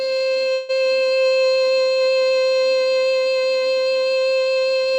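At 0.53 s the music stops moving forward and a call audio freeze begins. It lasts until 0.71 s. For about 155 ms the last sound is stretched into a buzzy, fading fill, with no drop to silence. The likely cause is packets held up in transit, leaving the jitter buffer empty. When they arrive, the music picks up exactly where it stopped. Nothing is lost, but everything after runs about 155 ms late.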